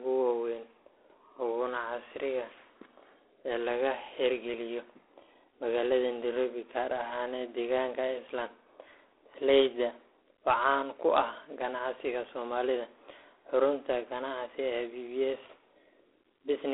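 From start to finish the speech carries G.726 ADPCM damage, and it's plainly audible. The coder sends each sample as a few bits of difference from a running prediction. At this coarseness the error from quantizing that difference turns into a harsh, rasping hiss that swells and fades with the speech level, which fits the 24 kbit/s mode. The line band is roughly 300 Hz to 3.5 kHz, and nothing at all gets through above 3.9 kHz.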